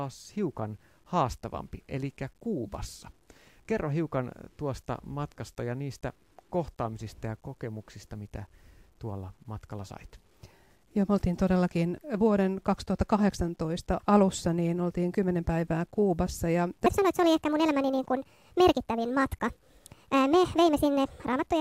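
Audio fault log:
throughout, low bit depth without dither: a grainy, signal-following distortion rides on the speech, roughest in quiet passages and tails where the sound turns gritty and sputters. This likely comes from truncation to about 10 bits without dither, leaving error around 45 dB below the signal.
16.86–21.60 s, section at the wrong speed: the final stretch of speech plays about 1.49 times too fast, so it sounds hurried and raised in pitch by roughly seven semitones. Likely cause is playback against the wrong clock for that section.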